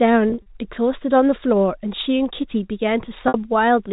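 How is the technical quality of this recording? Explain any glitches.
Two dropouts from packet loss with pitch repetition mar this telephone-band speech, which arrives through G.711 telephone coding and so stops at 4 kHz. Between 0.30 and 0.46 s, about 100 ms of audio went missing in scattered gaps, the longest around 40 ms. At 3.28 to 3.34 s a single stretch of about 60 ms dropped out. Each time the receiver looped the last pitch period to fill the gap, so the sound briefly hangs on a buzzy, held tone before the speech picks up again.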